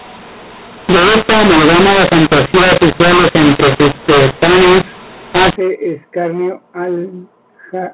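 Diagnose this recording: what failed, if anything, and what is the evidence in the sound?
The failure is at the codec stage: a mu-law and A-law mix-up. From 0.0 to 5.56 s the speech is harsh and gritty, and the pauses fill with noise where there should be near-silence. The stream was encoded as A-law G.711 at 8 kHz, hence the 4 kHz bandwidth ceiling, but decoded with the mu-law table. The two laws map 8-bit codes to different levels, so loud and quiet samples come out at the wrong levels and the quietest ones rise well above silence.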